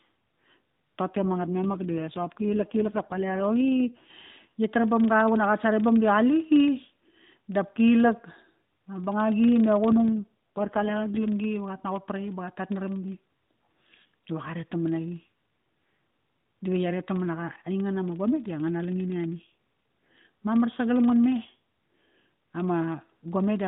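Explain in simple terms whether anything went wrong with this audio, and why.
A low buzz sits under the whole recording, about 25 little ticks a second. That's a filter restarted on every block: each chunk of audio kicks off with a tiny click.

On top of that, the speech goes rougher and more robotic twice, from 1.14 to 4.14 s and from 9.92 to 11.28 s. That's an AMR rate drop, where the mobile phone codec briefly squeezes the voice into fewer bits.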